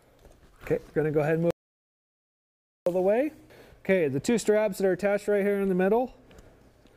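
At 1.51 s the sound cuts out abruptly into silence, with no room tone underneath, and resumes mid-flow at 2.86 s. This audio dropout to silence removes about 1.36 s of material, likely from the input being lost while recording continued writing silence.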